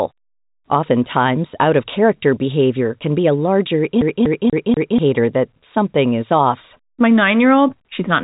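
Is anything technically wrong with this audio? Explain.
Yes. From 4.01 to 4.99 s, after "can be a larger", a CD stuck on one turn replays the same 0.24 s four times, each jump briefly muted. Its even, repeating stutter, unlike a random dropout, ends before "that something is off". The telephone-band G.711 coding, cutting everything above 3.8 kHz, is not a fault.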